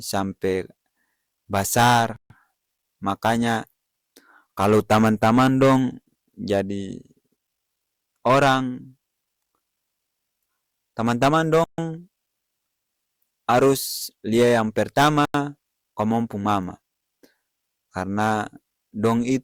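Bluetooth stalls cut this speech clip to silence three times: 2.16 to 2.30 s (138 ms), 11.64 to 11.78 s (141 ms), and 15.25 to 15.34 s (93 ms), just after "harus lia yang". Each gap is silence before the audio resumes, which points to interference likely delaying packets until the headphones' buffer ran empty and playback waited for the retransmitted data to arrive.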